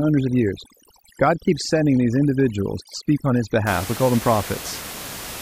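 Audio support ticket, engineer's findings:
Overdone noise removal, 0.00 to 3.67 s: noise reduction set far too aggressive, suppressing frequency bands near its noise estimate and taking quiet speech detail with them. Background drops and breaks up into twinkling specks. Room noise sits about 13 dB below speech.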